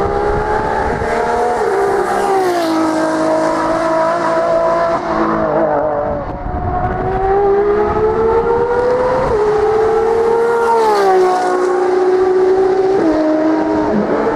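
Nothing is technically wrong with this audio, and no faults can be heard anywhere in it.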